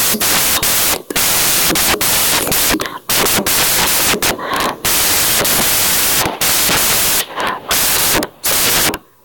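From start to finish, the samples are built from the wrong bytes. The decoder assembles each sample incorrectly, whether by reading one byte out of step, reversing the byte order, or assuming the wrong alignment, so the rapidly fluctuating low-order bits end up as the most significant part of every value. The speech comes through as loud, harsh broadband noise, close to white on the louder sounds.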